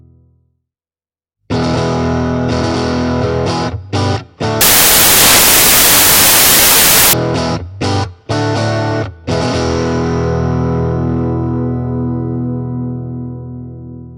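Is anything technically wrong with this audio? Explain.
Yes. From 4.61 to 7.13 s the audio turns into loud, harsh broadband noise: samples built from the wrong bytes. The reader misassembles each sample's bytes, so rapidly changing low bits dominate. Unlike ordinary hiss, it stays loud.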